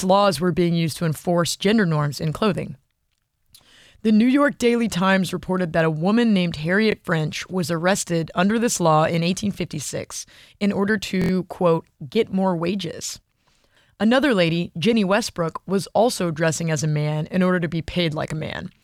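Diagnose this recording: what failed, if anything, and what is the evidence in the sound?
Short stutters at 6.92–6.94 s after "that a woman named", 9.54–9.57 s after "under this law in", and 11.22–11.31 s after "in order" (four extra repeats): a repeated buffer at the driver stage, where a roughly 23 ms chunk, fitting a 1024-sample buffer, replayed because new audio arrived late.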